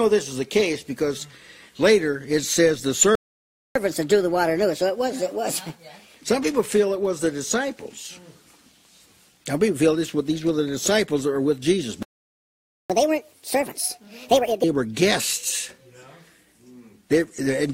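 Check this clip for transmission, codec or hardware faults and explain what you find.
Two faults appear here, twice each: a playback stall followed by catch-up at higher speed.

The first playback stall runs from 3.15 to 3.76 s, a gap of 0.60 s. The second runs from 12.03 to 12.90 s, lasting 0.87 s. Each time the sound cuts out in mid-flow and the output falls silent. The likely cause is a player that ran out of buffered data or had its thread blocked. Output resumes only once it recovers.

Catch-up at higher speed follows each stall at once. From 3.76 to 6.16 s the audio plays at 1.25 times normal speed, raised about four semitones. From 12.90 to 14.64 s it plays at 1.5 times speed, roughly seven semitones higher. The player is resampling its backlog to regain lost time. Everything sounds faster and brighter, then drops back to normal pitch and tempo.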